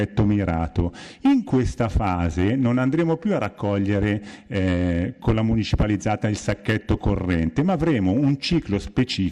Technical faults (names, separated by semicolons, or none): none